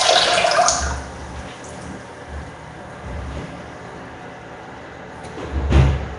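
Throughout, a hard ceiling near 10.6 kHz and a rough, hissy, smeared texture with noise-filled gaps point to likely Nellymoser compression, plainly audible, consistent with roughly 44 kbps.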